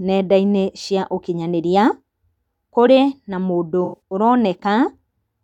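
From 3.84 to 4.00 s, AAC frame loss with concealment smears the speech. About 149 ms of audio went missing across roughly 171 ms, the longest gap around a tenth of a second. The decoder reused the last good spectrum with randomised phase, producing a noisy, phasey blur. A spectrogram shows harmonics frozen into flat streaks; the waveform envelope sags.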